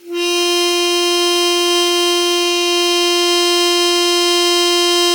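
A music clip with generation loss throughout. The sound is swirly, smeared and hollow, and attacks blur into their surroundings. Nothing reaches above 17.3 kHz. The damage is heavier than a single encode at a moderate rate would leave. The likely cause is repeated lossy coding, around ten passes, which fits Vorbis at close to 88 kbit/s. Each pass requantises on a shifted frame grid, so noise and spectral holes stack up.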